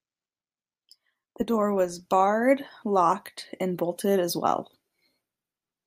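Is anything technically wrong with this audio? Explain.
No, nothing is technically wrong with this audio.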